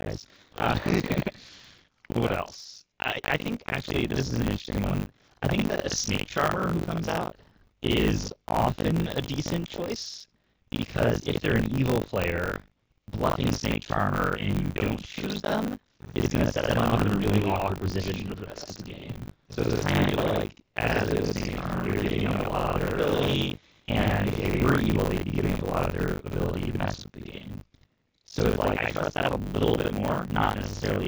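AMR wideband (HD Voice) codec throughout: the speech sounds rough and raspy, with nothing above 7 kHz, which points to the lowest AMR-WB rate, around 6.6 kbit/s.

Buffer tearing throughout: writer and reader have slipped, so roughly half of each buffer holds audio about 70 ms old, producing a 50 Hz robotic buzz.

Doubled audio track from 16.63 to 24.71 s, starting after "is going to" and ending before "evil they'd be giving": a full-band copy at about equal level trails by roughly a tenth of a second, likely from a second, slower capture path.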